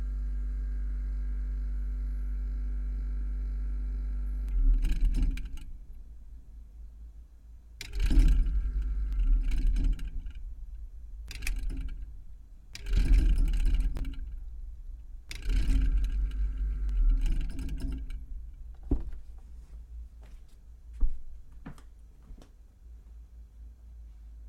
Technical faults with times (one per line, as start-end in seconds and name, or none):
13.97-14.00 chunks out of order